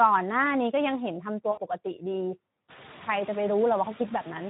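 From the very start you can hear noise suppressor artifacts. The suppressor pulls the background down by about 14 dB between phrases and lets it back up under the speech.

The Speex codec damage runs the whole way through too, and it's plainly audible. The speech sounds hoarse and grainy, the way CELP does when it's short of bits for the excitation, which fits a low-rate setting of around 11 kbps.

At 1.51 to 1.60 s there's VoIP packet loss concealed by the speech codec. About 60 ms of audio went missing, which fits three 20 ms frames. The decoder filled the gap by extrapolating from its last pitch and filter, and the speech stays weak for a moment after the data returns.

From roughly two and a half seconds in, the room noise comes up noticeably. It's part of the recording, but it gives the suppressor more to chew on.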